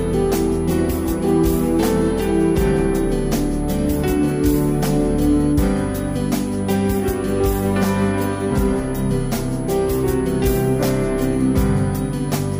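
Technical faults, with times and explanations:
Throughout, switching supply whistle. A thin, high whistle sits near 10 kHz, about 25 dB below the sound. Its pitch wanders between 9.7 and 10.7 kHz. A switching power supply is cycling at an audible rate, and that rate shifts as its load changes.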